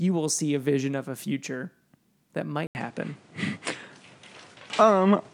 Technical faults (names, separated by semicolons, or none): input switched to a poorer device